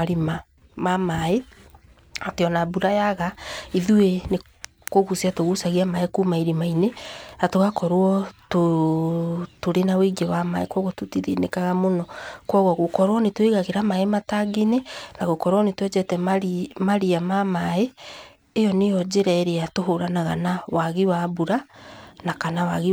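No technical faults can be heard anywhere in the speech recording, and the signal holds steady throughout.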